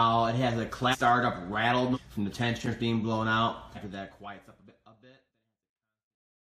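Brief smeared blips at 0.91 s, 1.93 s, 3.74 s and 5.27 s mark sudden jumps forward in the sound, of about half a second, 0.7 s, 0.3 s and 0.7 s. These are compressed frames skipped: whole blocks of coded audio never reach playback, either missing from the file or rejected by the decoder as damaged. The jump sizes fit frames of about 46 ms, and because neighbouring frames overlap, each join smears instead of clicking. The clip then fades smoothly out at its end.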